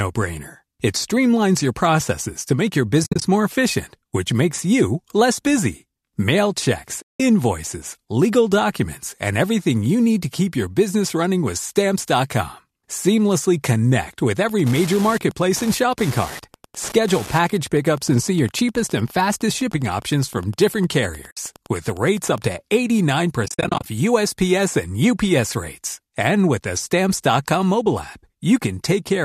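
At 3.04 to 3.22 s, between "processes to make your" and "more efficient which makes", AAC frame loss with muting leaves about 130 ms of gaps spread over 180 ms, the longest run roughly 70 ms. The gaps fit 10 ms frames from the low-delay AAC codec that is likely in use. The decoder zeroes each missing frame, and the overlapping windows fade the sound out and back in, so the holes have soft edges. That is what separates them from a hard dropout.

A second loss at 7.02 to 7.20 s blanks about 180 ms.

From 14.43 to 22.43 s, starting after "connect with", Wi-Fi interference adds a tick every 102.4 ms, about ten per second, at about 20 dB below the sound. That steady beacon rate marks it as radio pickup rather than electrical hum.

Within that stretch, a 60 ms muted gap falls at 21.31 s.

At 23.46 to 23.86 s, about 250 ms is lost in short holes, the longest around 50 ms, scattered over 400 ms.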